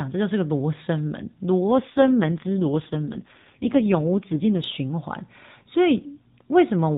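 From 1.66 to 4.68 s, an AMR rate drop cuts the codec's bits, fitting 12.2 to 4.75 kbps; speech turns rougher and more synthetic.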